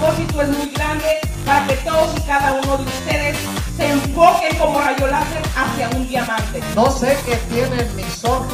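No technical faults can be heard in the signal at any point.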